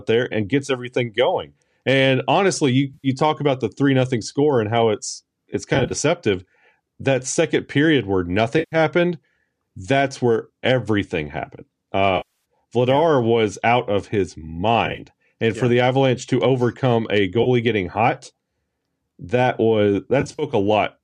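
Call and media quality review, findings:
AAC frame loss with concealment, seven events: 2.94 s (100 ms); 5.75 s (short runs over 160 ms); 8.59 s after "second period where" (130 ms); 12.17 s after "that's where everything happened" (280 ms); 14.86 s (short runs over 120 ms); 17.43 s, between "to overcome a" and "getting hot" (30 ms); 20.21 s (runs over 180 ms). Decoder refills gaps from the last good spectrum, so the gaps sound smeared and phasey rather than like the hard silence of plain dropouts. Gap lengths fit 10 ms frames, pointing to low-delay AAC (likely AAC-ELD).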